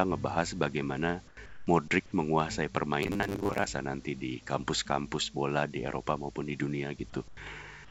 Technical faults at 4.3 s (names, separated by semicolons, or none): none